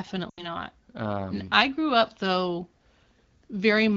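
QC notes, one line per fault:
0.29–0.54 s, lost AMR speech frames: speech smears then fades out fast, about four 20 ms wideband frames concealed, before returning weak or rough.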